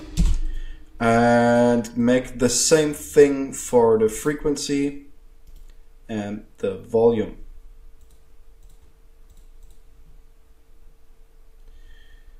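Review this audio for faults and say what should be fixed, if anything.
Nothing should be fixed; the review finds no faults in this audio.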